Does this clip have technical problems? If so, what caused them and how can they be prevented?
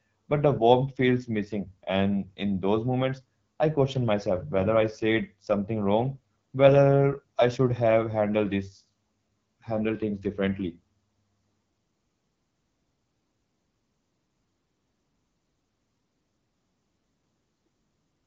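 Yes. Throughout the speech, AMR wideband (HD Voice) codec damage is plainly audible: nothing above 7.5 kHz, with a rough, raspy texture as the pulse-driven vocal tract model runs short of bits, which fits the 8.85 kbit/s mode. Prevent it by encoding at 12.65 kbit/s or higher.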